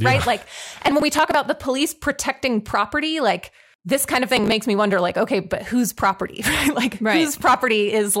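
Speech recording with two bursts of processor overload crackle, from 0.74 to 1.34 s before "the police protecting property" and from 4.31 to 4.52 s between "like this kind of" and "me wonder like okay". Many roughly 5 ms buffers were skipped again and again across each burst, about 20 in the first and 10 in the second, leaving gritty tearing rather than one clean dropout.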